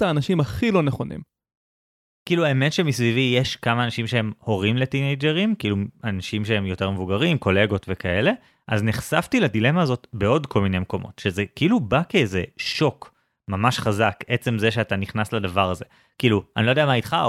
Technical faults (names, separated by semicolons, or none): none